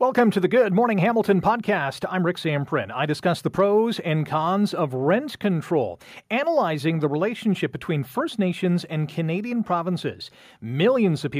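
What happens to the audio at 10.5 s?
Nothing goes wrong at 10.5 s; the speech carries on intact there, with no dropout, click or other fault at that moment.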